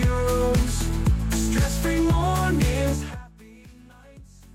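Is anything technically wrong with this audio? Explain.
Yes. From 2.91 to 3.32 s, a fast ticking zipper noise rides on the sound as the level drops by roughly 25 dB, applied in 1 dB jumps about 70 times a second with no smoothing between them.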